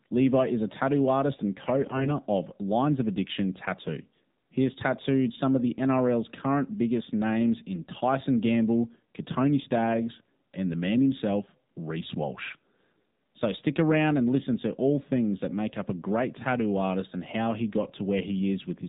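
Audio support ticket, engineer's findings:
Narrowband, buzzy, synthetic-sounding speech for the full clip, no content above 4 kHz. Component: AMR narrowband mobile codec (AMR-NB) at 7.4 kbps. Mechanism: 8 kHz sampling removes the top band. At this low rate each 20 ms frame gets only a few excitation pulses to drive the vocal-tract model, so the voice comes out coarse and artificial. Codec damage plainly audible throughout.

Hoarse, scratchy, gargly burst at 1.82–2.11 s, right after "tattoo artist and co". Pitch and level roughly held. Component: AMR bit errors on a weak link. The 0.29 s span fits about 14 corrupted 20 ms frames. Bit error rate a few percent, in less-protected bits while the checksum still passed. Misplaced pulses and off gain, pitch and spectral values roughen the voice.

Same gargly roughness, shorter, at 12.42–12.56 s. Same AMR bit-error mechanism, consistent with about 8 frames hit.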